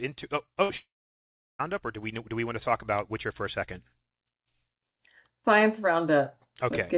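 At 0.46 s a short concealed packet loss goes by as a tiny smear. About 20 ms of the stream failed to arrive, and the receiver bridged the hole by extending the preceding sound for roughly 14 ms before blending back into real audio. It is a momentary wobble.

From 0.63 to 0.71 s comes a burst of packet loss: about 60 ms went missing in a row. The receiver extended the last sound for around 57 ms, lowering its level as it went, so a held buzz or thinning hiss replaces the real audio before playback resumes further along. What separates it from the earlier smear is that the tail audibly decays and a chunk of material is skipped.

Only 60 ms later, at 0.77 s, the audio cuts out until 1.61 s, most likely a long network dropout. Roughly 820 ms is lost. The concealment fades quickly, and about 720 ms of that stretch is plain silence. That dead stretch distinguishes it from the burst. The sound then returns mid-flow with the intervening part gone. 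The band stops at 4 kHz throughout, which fits a 64 kbps G.711 mu-law call path.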